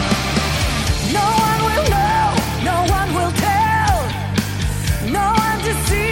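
Nothing goes wrong anywhere in this audio, so there are no technical faults to describe.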